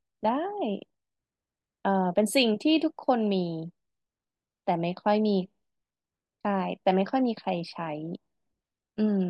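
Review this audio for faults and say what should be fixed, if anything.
Nothing in the recording needs fixing. No technical fault can be heard anywhere in the speech, so no correction or preventive step is called for.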